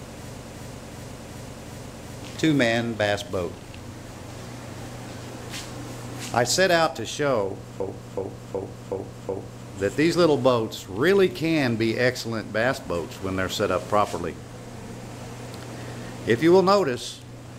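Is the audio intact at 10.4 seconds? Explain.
Yes, at 10.4 seconds the audio runs on cleanly, with no dropout, click, distortion or other fault at that moment.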